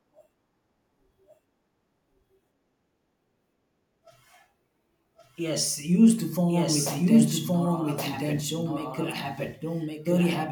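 Throughout, the speech carries a doubled audio track: a second full-band copy, roughly as loud, trails by about a second, likely from a slower capture path recording it again.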